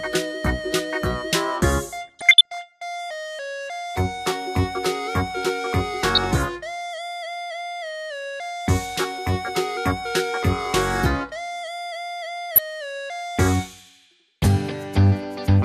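The sound is dull and granular throughout, with a gurgling roughness and treble that flickers away. On a spectrogram the upper bands appear and vanish in blocky strips. This is MP2 compression, likely at a low rate around 80 kbps, starving the upper sub-bands of bits. DAB burbling adds bursts of watery, bubbling noise at 2.07–2.62 s, 6.15–6.43 s, 12.55–12.60 s and 14.36–14.43 s. Scattered bit errors, heaviest in the first burst, corrupt sub-band levels for single frames. These show as short, isolated bright patches on the spectrogram.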